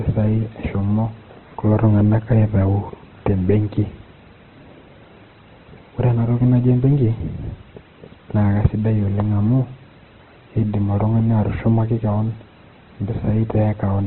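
Throughout, the speech stops at 4.1 kHz and sounds grainy and rough. The likely cause is heavy Opus compression filling starved bands with noise, fitting about 12 kbps.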